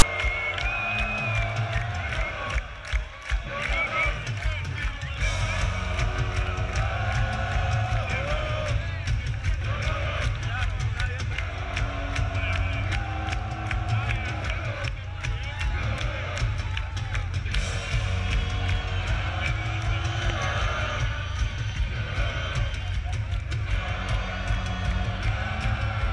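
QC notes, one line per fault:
0.00 s, file tags played as audio: right at the start there's a short, hard-edged rasp, gone in under 20 ms, before the real audio begins. What's happening is that a block of text tags at the head of the file is being read as if it were samples. Text bytes make a lopsided, buzzy waveform sitting off to one side of zero, so you get a harsh crackle rather than clean static, with abrupt edges where the tag data starts and stops.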